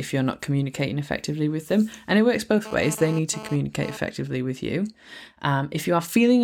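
After "it works", from 2.65 to 3.97 s, GSM phone buzz: rectified 217 Hz radio bursts give a raspy, harmonic-rich rasp about 14 dB down, harsher than mains hum, gone before "with you".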